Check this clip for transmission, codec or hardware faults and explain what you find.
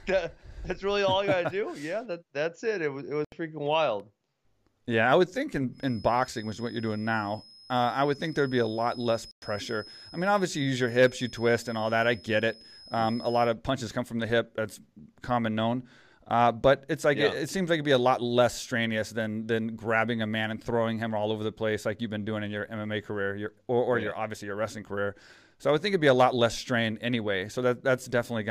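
Two faults show up in the speech: a couple of dropouts and a steady whistle.

Bluetooth stall, at 3.25 s between "was it" and "freaking wild" (76 ms) and at 9.31 s (108 ms): the sound cuts to silence, likely because delayed packets starved the headphone buffer.

Feedback whistle, from 5.71 s after "I would think" to 13.57 s before "punches come from the": a thin 5.1 kHz tone sits well under the speech, swelling and fading. It's likely a speaker-to-mic loop hovering just short of a howl.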